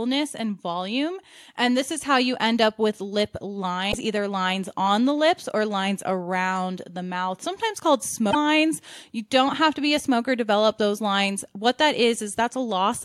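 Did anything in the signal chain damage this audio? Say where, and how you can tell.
Yes. Damaged data in a compressed stream shows up twice in this speech clip, from 3.88 to 3.95 s and from 8.27 to 8.35 s. Each is a brief chirp or blip of 65 to 85 ms that breaks the speech. The fault is at the codec stage. Corrupted bytes in the encoded file or stream made the decoder misread those frames, lose sync and hunt for the next valid frame header before decoding resumed.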